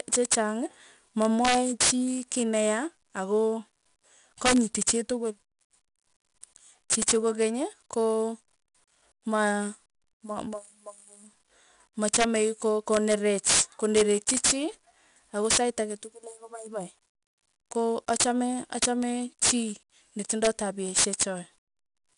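Throughout the speech runs 4-bit ADPCM compression: each sample is coded as a coarse step from a prediction, so a gritty hiss rides every loud syllable and attacks roughen. A spectrogram shows level-following broadband noise and nothing above 10.6 kHz, which fits roughly 89 kbps.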